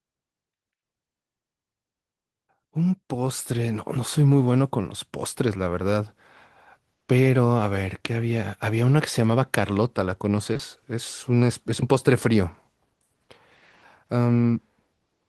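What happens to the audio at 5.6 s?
Nothing goes wrong at 5.6 s: the speech carries on intact through that moment, with no dropout, click, glitch or change in level.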